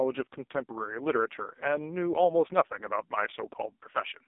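Throughout, the speech has been squeezed through an AMR narrowband mobile codec, with heavy damage that fits its lowest rate, around 4.75 kbps. Rebuilt from a sparse, pulse-driven vocal-tract model, it sounds buzzy and synthetic, confined to 250 Hz–3.7 kHz, with nothing above 3.8 kHz.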